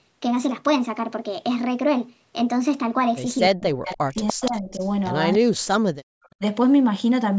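From 3.5 to 4.17 s the speech dips, by roughly 40 dB at its deepest: speech suppressed in double talk, likely because an echo canceller, hearing both sides at once, turned everything down. On a waveform the envelope collapses toward near-silence, and a spectrogram shows the harmonics and upper bands blanking out. The same dips return from 4.33 to 4.81 s and from 5.38 to 5.96 s.

Echo leak runs through this stretch: a faint copy of the speech, trailing it by 293 ms, at 3.85 to 3.95 s, louder from 4.27 to 4.89 s at about 10 dB under the speech, and a brief scrap at 5.33 to 5.38 s. The likely cause is loudspeaker pickup that one side's canceller failed to remove. On a spectrogram it looks like faint, time-shifted repeats of the preceding harmonic patterns.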